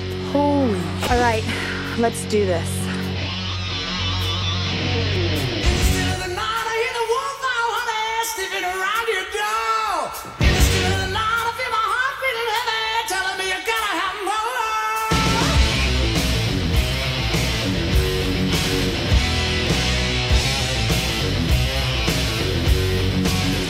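At 2.81 s, 5.16 s and 19.67 s the sound jumps forward, losing about 20 ms each time, most likely a dropped buffer (overrun). Waveforms show abrupt seams without gaps, and spectrograms show thin broadband vertical lines.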